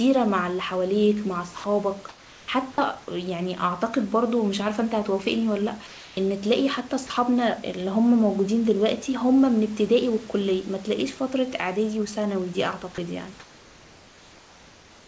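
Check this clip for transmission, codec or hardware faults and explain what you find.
Two kinds of fault show up, both around pauses in the speech. Everything sits below 8 kHz, which points to a wideband call codec such as G.722. There's also some room noise about 27 dB under the speech.

Sound dropped by the voice detector, at 1.58 to 1.64 s, 2.72 to 2.78 s and 7.07 to 7.10 s. These are short 30 to 60 ms gaps where bits of the sound disappear into a flat hiss. The likely cause is the sender's voice detector mistaking quiet tails for background and briefly cutting transmission.

Comfort noise in place of the background, at 2.09 to 2.48 s, 5.87 to 6.17 s, and from 13.40 s to the end. In these pauses the real room texture gets swapped for steady, featureless noise about 2 dB quieter, likely because the sender stopped transmitting and the receiver synthesized filler.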